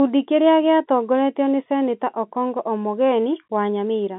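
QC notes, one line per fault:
No faults heard.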